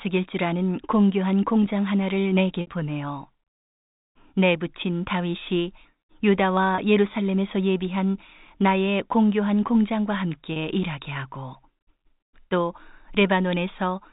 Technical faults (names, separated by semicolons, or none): packet loss with pitch repetition